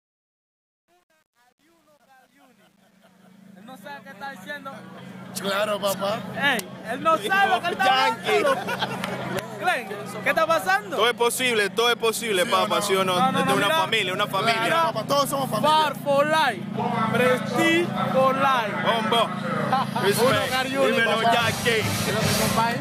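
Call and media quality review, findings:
Truncation distortion on the fade, 0.0–5.82 s, grittiest up to 4.49 s. Undithered fade/gain stage keeping too few bits, which fits roughly 9-bit resolution; quiet waveform goes square-stepped.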